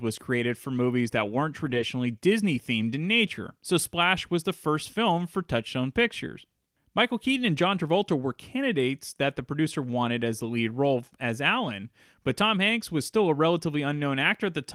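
Packets were lost just after "for movies that weren't," and the lost packets were rebuilt from error correction, from 1.65 to 1.83 s. About 100 ms of speech plays rougher and noisier, with no gap.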